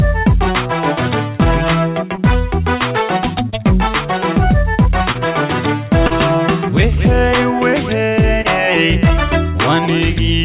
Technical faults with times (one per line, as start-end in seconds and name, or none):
2.15-2.20 short concealed packet loss
3.49-3.56 short concealed packet loss
5.12-5.17 short concealed packet loss
6.07-6.13 short concealed packet loss
8.41-8.47 short concealed packet loss